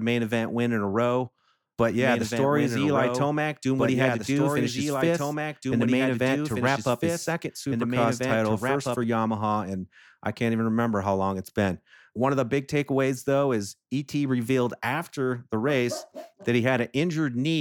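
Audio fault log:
2.00–9.04 s, doubled audio track: a second copy of the speech runs about two seconds behind the first and about 5 dB quieter, starting and stopping abruptly with no decay or room colour, likely from a slower second capture path or two out-of-step copies in an edit.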